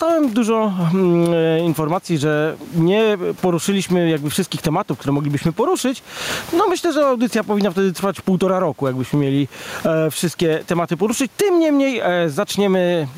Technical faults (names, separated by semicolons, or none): gain pumping